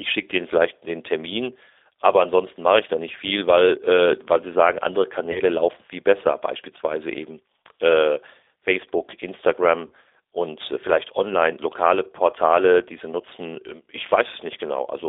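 G.729 codec coding runs through this whole speech recording. The band is limited to roughly 300 Hz to 3.6 kHz, and the rough, slightly synthetic texture fits an 8 kbit/s model that rebuilds speech from a filter, pitch predictor and sparse pulses. VoIP packet loss concealed by the speech codec occurs at 5.32 to 5.40 s and again at 9.87 to 9.92 s. In each gap about 30 ms of audio is missing, consistent with a single lost packet. The decoder stretches its last pitch and filter into a fading buzzy tone or coloured noise, and the voice stays weak or distorted for tens of milliseconds or more afterwards.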